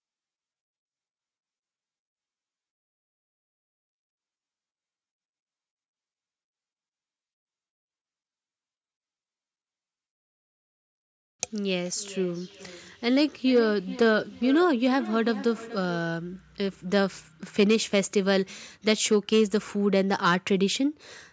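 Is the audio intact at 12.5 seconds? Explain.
No. From 11.84 to 16.22 s, feedback echo between two devices loops speech round roughly every 0.4 s, thinner and ringing, unlike a single clean echo.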